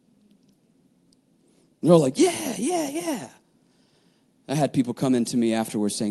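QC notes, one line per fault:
No faults heard in this speech clip.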